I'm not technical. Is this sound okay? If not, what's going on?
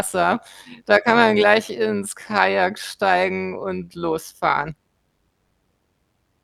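No. Overlap-add ripple runs through the whole clip, from the first moment to the last. The speech was chopped into many short, overlapping slices and stitched back together, but the overlaps don't add up evenly, so the loudness swells and dips once per slice, about a hundred times a second. That rapid pulsing is too fast to hear as separate beats. Instead it gives the voice a buzzy, metallic sound.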